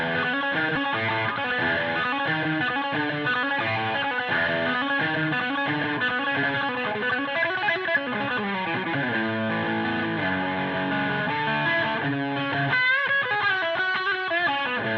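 Around 0.75 to 0.88 s, a block of audio was dropped while later material was already queued, a skip ahead. About a second of sound never plays, and nothing fills the gap. The two sides are spliced almost directly, so the audio lurches forward abruptly, with the missing stretch simply absent.

From 2.07 to 4.22 s, the jitter buffer was holding more audio than its target, and it trimmed the excess by repeatedly cutting out short pitch-period-sized slices. This jitter buffer speed-up runs the sound about 8% fast, removing roughly a fifth of a second while the pitch stays unchanged, so the passage feels hurried. A second, gentler speed-up follows from 4.77 to 8.42 s at about 4% faster, shedding roughly 150 ms. That stretch runs only slightly fast, below the point where it clearly sounds hurried.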